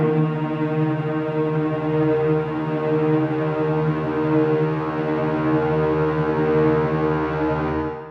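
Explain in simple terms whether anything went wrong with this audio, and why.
Nothing went wrong here: listening all the way through, I can't pick out anything in this recording of sounds that points to a problem in how it was captured or passed along.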